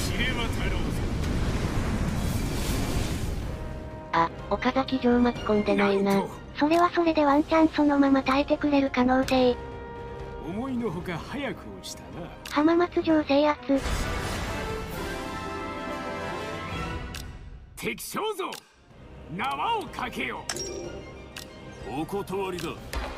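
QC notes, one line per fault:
Nothing here needs flagging; I listened to the whole thing and it's all good.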